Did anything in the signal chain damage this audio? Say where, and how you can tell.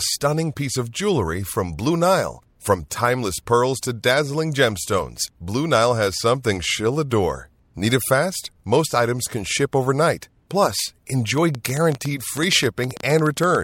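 Yes. From 11.38 s to 13.56 s a train of clicks ticks over the speech: about twenty sharp pops of much the same shape, arriving at roughly 9.7 per second but unevenly spaced, and peaking about 10 dB above the speech itself, so they stand out even in pauses. The repeated identical pulses point to a source outside the speech, most likely electrical interference coupling into the analogue wiring or a faulty connection or power supply.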